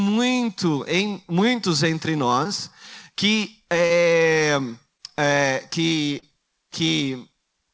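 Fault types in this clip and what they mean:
Short concealed packet loss: four brief smears or wobbles in the speech, the first just after "em muitos entre", where a tiny slice of sound seems to stretch or blur before the talk resumes. About 20 ms of audio failed to arrive in time at each point, 40 ms at the last one near 6.2 s, and the receiver bridged each gap by extending the preceding sound before fading back into the real signal, heard over the call path's 8 kHz ceiling.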